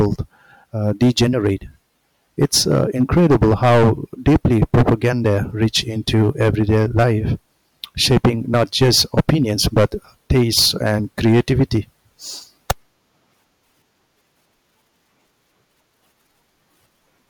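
Speech with hard clipping in bursts at 0.0–0.13, 0.87–1.52, 2.42–3.91, 4.27–7.13, 7.84–9.85, 10.31–11.78 s and a brief burst at 12.70 s. Overdrive runs about 7 dB early, rising to about 19 dB in the middle stretches, where peaks are sliced flat and a harsh, buzzy fuzz rides every loud syllable. Unlike soft saturation's rounded warmth, these abrupt flat tops throw off bright, high harmonics.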